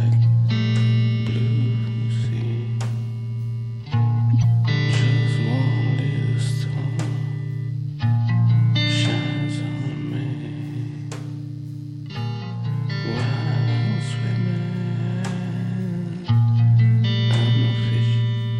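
At 4.33 s a short, harsh chirp cuts through the audio, a squeaky burst of misplaced noise lasting about a tenth of a second, to 4.45 s, and peaking fairly loud at around -10 dBFS. This is a corrupt frame decoded: bits inside the compressed stream were damaged, but the decoder played the frames anyway, misreading gains and spectral codes so energy landed at wrong frequencies. The burst's length points to a run of several consecutive damaged frames.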